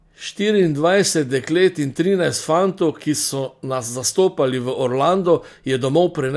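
The speech signal holds steady throughout, with no dropouts, glitches or other technical faults to be heard at any point.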